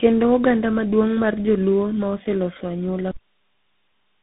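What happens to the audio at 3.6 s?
At 3.6 s the audio is in a cut-off end. The signal stops abruptly at 3.11 s, mid-sound, and falls to digital silence with no decay until the clip ends at 4.23 s. The final buffers were never written or played out.

Up to the cut, the speech shows tandem speech coding. It sounds rough, muffled and warbly, with nothing above 3.8 kHz, which fits several speech codecs in sequence, each re-encoding the previous one's already degraded output.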